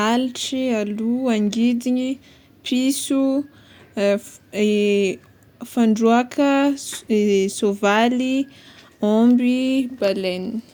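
No technical faults are audible.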